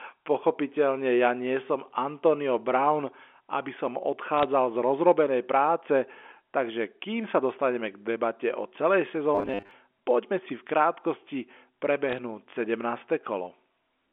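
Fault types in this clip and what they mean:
Bit errors on a digital phone line: Flipped bits on the telephone line corrupt single samples, with hits on high bits or the sign of loud samples giving a tick. Short bursts of crackle occur at 4.38 to 4.44 s and 12.09 to 12.18 s. About 0.3 percent of bits look affected.
Robotic sound from repeated short buffers: From 9.35 to 9.71 s the speech turns into a rigid, metallic buzz at 100 Hz. The likely cause is audio arriving too seldom, with the last 10 ms repeated to fill the gaps. About half the audio in that stretch is repeats.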